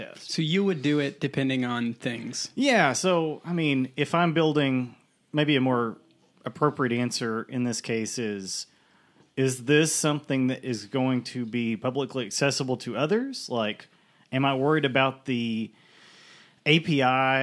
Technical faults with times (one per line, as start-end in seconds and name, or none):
none